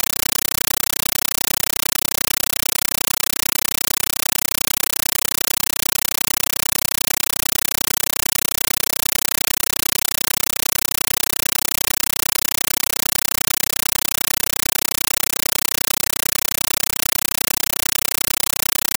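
From start to finish the sound is replaced by very loud, harsh static that chatters at a steady 31.25 times a second, each burst about 9.33 ms long with silence between. This is a compressed stream played as audio: an AC-3 (Dolby Digital) bitstream, which fits a 448 kbps stream, was passed over the digital link and treated as ordinary samples instead of being decoded. Each data frame comes out as a noise burst followed by zero padding.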